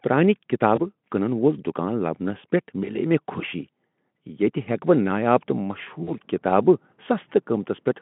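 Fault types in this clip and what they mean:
VoIP packet loss concealed by the speech codec: the decoder extrapolates lost 20 ms and 40 ms stretches near 0.75 s and 6.03 s, leaving short, fading smears.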